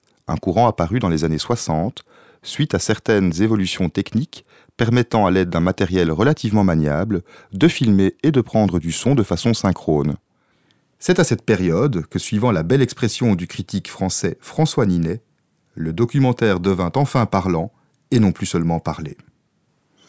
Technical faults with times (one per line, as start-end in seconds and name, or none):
none